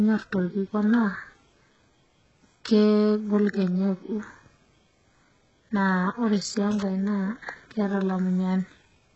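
Across the whole clip, the speech carries heavy damage typical of HE-AAC compression. Nothing is present above 8 kHz. The upper band sounds synthetic rather than recorded. It seems rebuilt by spectral band replication: lower frequencies copied upward under a coarse envelope. Its harmonics do not line up with those below the crossover. S sounds come out gritty and lispy, with a metallic sheen. The coarseness points to a very low bitrate, likely around 8 kbps.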